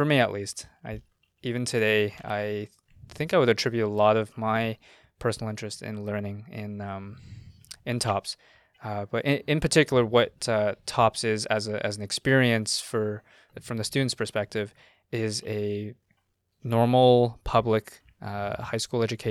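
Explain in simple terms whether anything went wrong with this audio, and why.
Nothing went wrong here; the speech holds together steadily all the way, with nothing that stands out as a technical problem.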